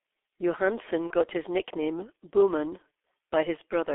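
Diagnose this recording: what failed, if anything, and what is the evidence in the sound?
Codec stage, throughout. G.723.1 coding makes the speech muffled and hoarse, with blurred consonants. Nothing passes outside roughly 300 Hz to 3.5 kHz, and the codec runs at about 6.3 kbit/s.

Network stage. At 1.07 to 1.13 s, just before "his nickname", VoIP packet loss was concealed by the speech codec. The decoder extrapolated over the 30 ms gap from its last pitch and filter, lowering the gain.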